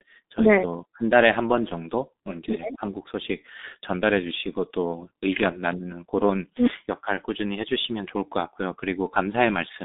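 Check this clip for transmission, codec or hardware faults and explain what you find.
The speech carries G.723.1 codec damage, and it runs through the whole clip. Nothing is heard above 3.8 kHz. The band sits roughly between 200 Hz and 3.7 kHz, like a phone line. The damage is heavy, which fits a rate near 6.3 kbit/s. The codec rebuilds speech from a coarse vocal model updated only every 30 ms. So consonants smear, and the voice comes out muffled and hoarse.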